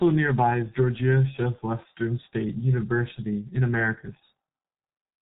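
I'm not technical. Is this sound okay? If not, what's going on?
No. A G.723.1 codec affects the speech from start to finish. This early internet-phone codec squeezes the voice heavily and discards everything above about 4 kHz, so the speech sounds muffled and hoarse, and consonants blur together.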